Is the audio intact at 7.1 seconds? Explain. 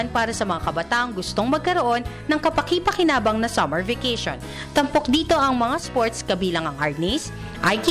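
Yes, the audio is intact at 7.1 seconds, with no dropout, click, distortion or other fault audible at that moment.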